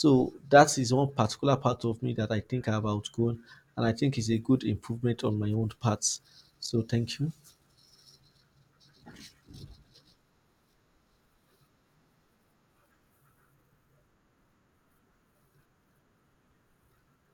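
Speech recording with no audible technical faults at any point.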